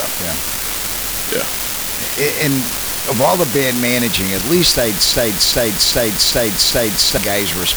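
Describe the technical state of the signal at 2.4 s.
An unreliable data bit, present throughout the clip, flips at random and adds equal-sized spikes, giving a steady crackling fizz at 2.4 s that persists through pauses.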